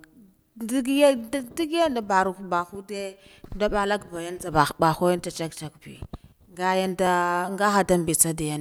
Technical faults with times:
1.17-8.24 clock drift buffer slips

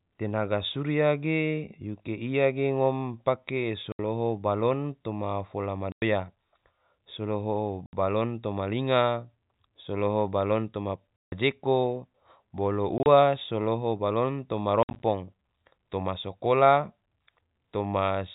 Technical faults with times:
3.92-3.99 packet loss filled with silence
5.92-6.02 packet loss filled with silence
7.86-7.93 packet loss filled with silence
11.22-11.32 packet loss filled with silence
12.98-13.06 packet loss filled with silence
14.83-15.03 packet loss filled with silence

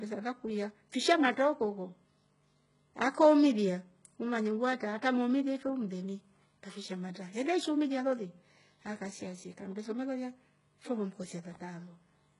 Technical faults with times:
0.00-12.40 HE-AAC compression

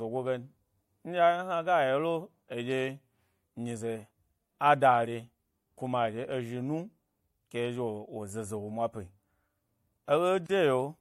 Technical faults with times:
10.46-10.49 gap at a join of encoded pieces

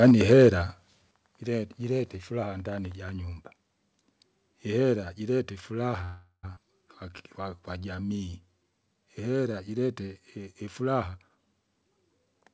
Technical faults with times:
0.02-0.48 microphone overload
0.11 microphone volume stepped down
1.11 microphone volume stepped down
6.04-6.46 call audio freeze
6.55-6.59 skip ahead
7.11-9.53 jitter buffer slow-down
11.14-12.49 jitter buffer speed-up

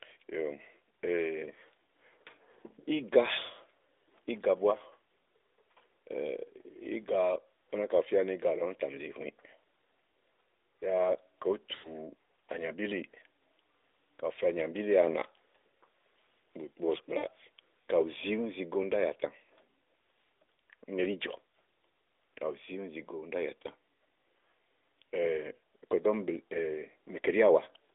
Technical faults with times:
11.76-11.98 lost AMR speech frames
17.18-17.28 lost AMR speech frames

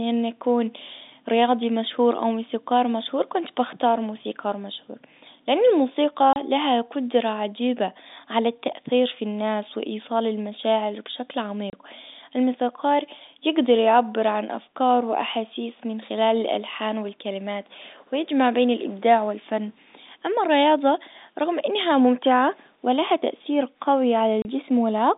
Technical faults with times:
6.33-6.36 packet loss filled with silence
11.70-11.73 packet loss filled with silence
24.42-24.45 packet loss filled with silence

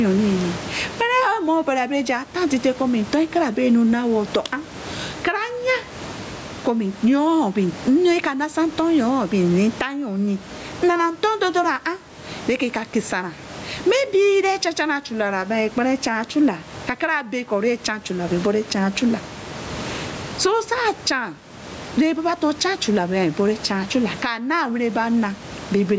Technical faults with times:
0.00-25.99 gain pumping

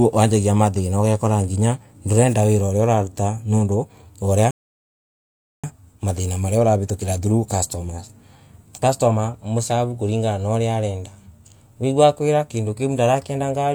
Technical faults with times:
4.51-5.64 rebuffering stall

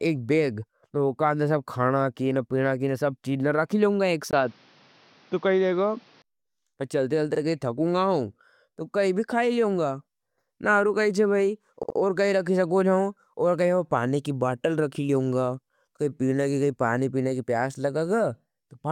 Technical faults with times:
4.31-6.24 input switched to a poorer device
7.34-7.39 repeated frames
11.82-11.96 repeated frames

